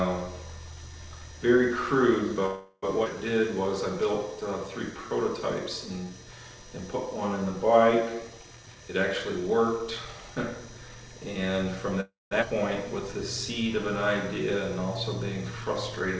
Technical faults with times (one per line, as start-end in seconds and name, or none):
2.46-2.84 call audio freeze
3.04-3.07 skip ahead
3.34-6.11 jitter buffer slow-down
8.56-10.96 jitter buffer speed-up
12.00-12.33 call audio freeze
12.41-12.44 skip ahead